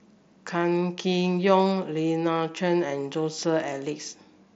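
No technical faults occur at any point, so there is nothing to describe in time order.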